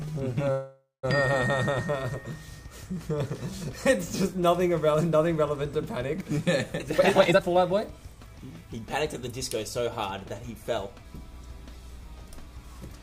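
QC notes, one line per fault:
0.51–1.05 s, call audio freeze: The receiver's jitter buffer likely ran dry while packets were held up in transit. The receiver fills the gap by extending the last sound, which decays into a fading buzz or hiss and ends in about 180 ms of silence. The inserted stretch lasts 519 ms in total. When packets resume, the audio picks up exactly where it stopped with nothing lost, so everything after it lands 519 ms later.
6.82–8.86 s, jitter buffer speed-up: The buffer held more audio than its target, so the receiver trimmed it back. It repeatedly cut out tiny pitch-period-sized slices, roughly half a second in all across this two-second stretch. The result plays at about 123% speed with the pitch unchanged, so the sound seems hurried and crowded rather than raised in tone, until the buffer returns to its normal depth.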